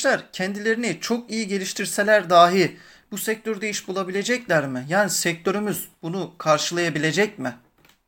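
No technical faults are audible in this speech.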